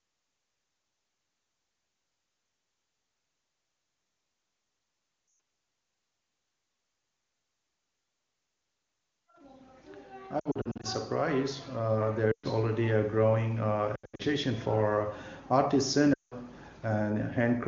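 Radio errors corrupted speech frames, and the decoder repeated its last good settings at falling gain. These lost AMR speech frames, at 5.27–5.39, 10.39–10.86, 12.32–12.46, 13.95–14.23 and 16.14–16.34 s, each drop quickly to near silence, then return rough.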